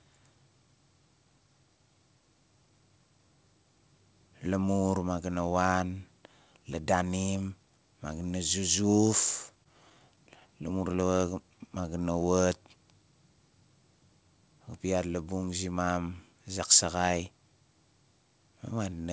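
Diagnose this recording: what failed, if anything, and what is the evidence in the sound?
Scattered short gaps, at the network and receiver stage. From 9.64 to 11.20 s, just after "na zuzuf", the receiver lost or received late roughly ten packets and filled each hole by continuing the preceding sound. No single patch lasts longer than about 15 ms, and together they cover around 7% of that stretch. The speech stays clear, but small ticks and smeared hiccups are scattered through it, all pointing to isolated packet loss rather than a sustained outage.

Jitter buffer slow-down, at the receiver's buffer stage. From 11.51 to 12.27 s the buffer was short on reserve, so it stretched the audio by repeating single pitch periods and slivers of pause, adding 97 ms. The speech plays at 88% speed at unchanged pitch. Syllables sound drawn out, which is typical of time-stretching that rebuilds delay headroom after a dip in packet arrivals.

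Jitter buffer speed-up, also at the buffer stage. From 14.28 to 14.85 s the buffer held more audio than its target, so it trimmed short pieces of one or a few pitch periods, removing around 70 ms. The speech runs at 113% speed with the pitch unchanged and sounds briefly hurried. The wideband call path, whose content stops at 8 kHz, fits G.722.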